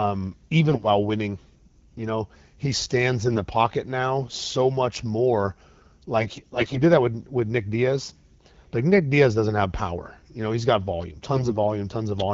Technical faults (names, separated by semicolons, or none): AMR bit errors